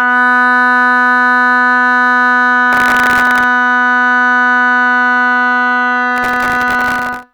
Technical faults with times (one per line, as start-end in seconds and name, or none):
2.73-3.44 processor overload crackle
6.16-7.23 processor overload crackle